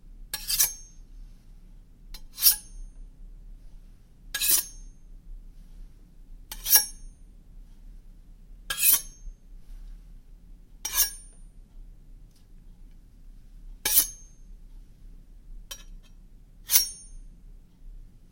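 No technical faults are audible anywhere in this recording of sounds.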